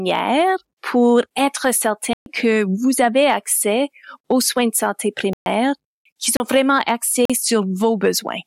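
Four times, likely because the output buffer went unfilled, the speech was replaced by blocks of digital silence, each starting and ending abruptly. The first, 2.13 to 2.26 s (128 ms), falls between "pour être" and "que vous avez accès". The second, 5.33 to 5.46 s, also 128 ms, follows "aux soins de santé". Shorter holes follow at 6.37 to 6.40 s (33 ms) and 7.25 to 7.30 s (43 ms), the last fitting a 2048-sample block.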